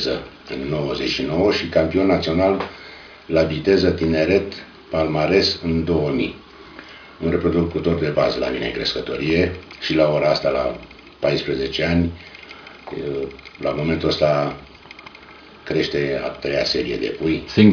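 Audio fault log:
No faults are heard anywhere in this audio. There is nothing to log against any time or range.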